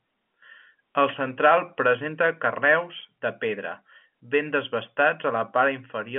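Nothing stood out on listening to this speech, which comes through at ordinary telephone bandwidth.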